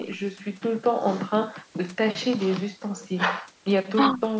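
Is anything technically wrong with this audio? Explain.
No, nothing stood out on listening to this speech clip, which carries the usual bass trim of a call's microphone processing.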